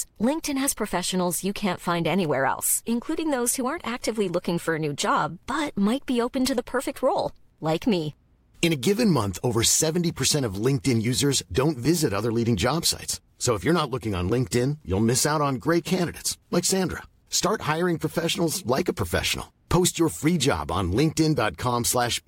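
No technical faults are audible.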